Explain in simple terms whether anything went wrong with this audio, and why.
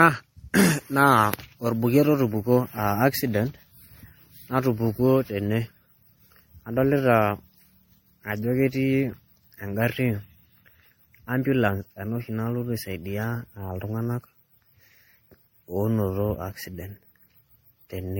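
Generation loss runs through the whole clip, from start to finish. The speech sounds swirly and hollow, with a smeared, watery quality, and the starts of sounds are blurred rather than crisp. Nothing is left above about 16.7 kHz. The likely cause is the recording being squeezed into MP3 and unpacked again around seven times. Each round throws away slightly different detail, so the damage piles up into something worse than one copy would show.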